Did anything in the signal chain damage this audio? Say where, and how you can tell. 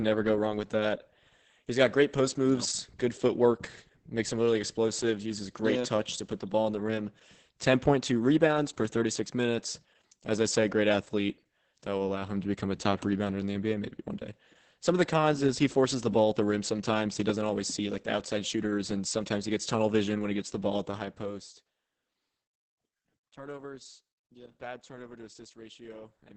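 Yes, at the codec stage: the speech shows heavy Opus voice compression throughout. It sounds muffled, hoarse and faintly robotic, which fits the SILK linear-prediction coder running at a low rate, around 10 kbps, in wideband mode. The coarsely coded excitation causes the roughness. On a spectrogram the energy stops abruptly at about 8.6 kHz for the whole clip, with smeared harmonics below. The codec worked in 20 ms coding frames.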